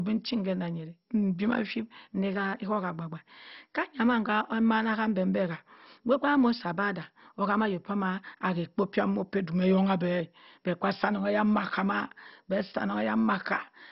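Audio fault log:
Throughout, MP2 compression: dull, gurgling speech from bit-starved sub-bands; the spectrogram shows a cut at 5.6 kHz and flickering bands, likely from a bitrate near 32 kbps.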